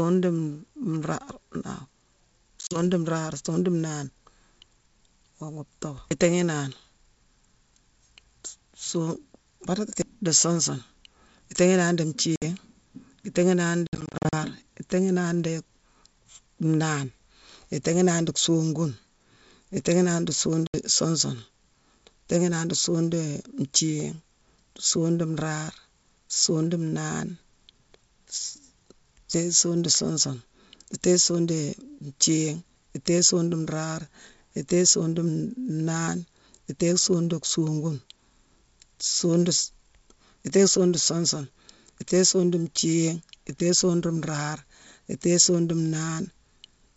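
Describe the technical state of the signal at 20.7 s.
At 20.67 to 20.75 s there's packet loss on an ADPCM call: roughly 70 ms of speech drops to hard-edged silence, then comes back briefly off while the decoder's predictor and step size catch up with the sender's.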